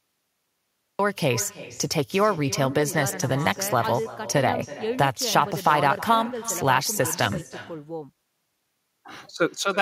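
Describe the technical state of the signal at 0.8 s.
At 0.8 s the signal is still inside a cut-off start. From 0.0 to 0.99 s there is only digital silence. The recording began late, so at 0.99 s the sound starts abruptly mid-sound, with no natural attack or fade-in.

The clip also has echo with no canceller throughout. The far end's loudspeaker feeds its microphone, and nothing removes that path. Once the sound begins, each part is shadowed around 300 ms later by a thinner copy about 17 dB quieter.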